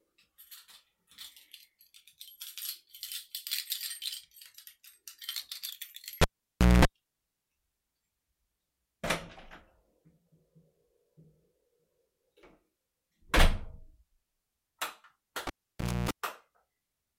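At 6.22 s the audio drops out with a pop and is cut off for about 0.58 s, including a 0.22 s burst of 60 Hz buzz, before a second pop restores it at 6.85 s. At 15.47 s the same thing happens: 0.59 s cut off, including 0.29 s of buzz, and the return at 16.11 s. Each event is a cable pulled and plugged in while live. The pops are the connection breaking and remaking. The buzz is mains hum picked up while only the plug tip touched the socket, before the ground made contact.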